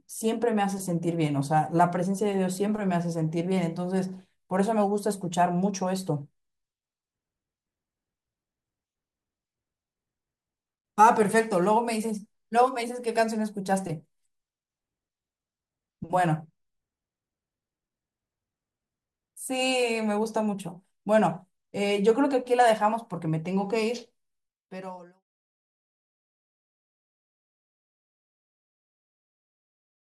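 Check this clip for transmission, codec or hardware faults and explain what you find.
No faults can be heard in this speech.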